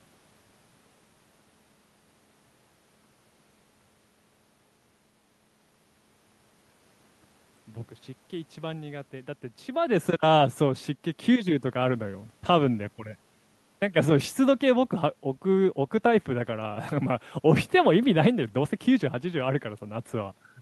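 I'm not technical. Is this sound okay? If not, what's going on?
Yes, nothing is wrong here.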